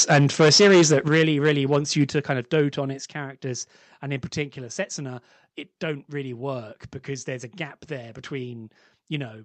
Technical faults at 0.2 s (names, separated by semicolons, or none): microphone overload